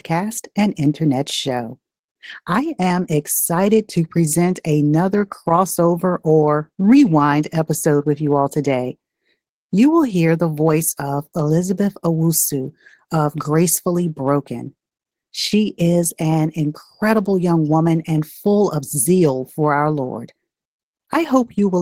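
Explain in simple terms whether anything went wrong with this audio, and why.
Nothing went wrong here; the speech comes through steady and whole, with no technical glitches getting in the way at any point.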